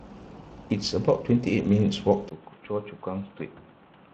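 Throughout, Speex codec damage is plainly audible: hoarse, noisy speech consistent with a mid-rate setting near 22 kbps. On a spectrogram, the upper band looks smeared and noise-like.

At 2.29 s, likely an input switched to a poorer device: after a 20 ms gap, the sound turns dull, drops roughly 10 dB, and gains faint new background noise. The spectrogram shows nothing above 3.8 kHz.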